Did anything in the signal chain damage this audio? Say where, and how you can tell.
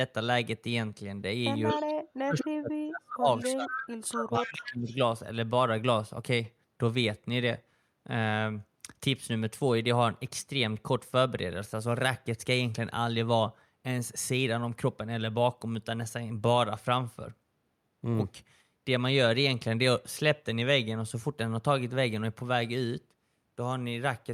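Yes. Echo leak appears at 1.69–1.93, 2.38–2.44, 3.41–3.68, 4.04–4.08, 4.42–4.66 and 4.89–4.96 s. Each is a delayed copy of the speech trailing it by a constant 234 ms, mostly about 15 dB below the speech. It rises to about 5 dB below at 2.38 s and falls to about 35 dB below at 4.04 s. The stage is call processing. The likely cause is a loudspeaker echo canceller that let part of its microphone pickup through and sent it back.

Speech suppressed in double talk occurs at 1.72–1.83 s, with a dip of about 10 dB, and across 2.24–4.92 s. In the longer span the speech is pulled down in pieces, as far as about 35 dB, for roughly two seconds in total. Both sides were sounding at once. The canceller, also in call processing, likely could not tell the local talker from the returning echo and attenuated both.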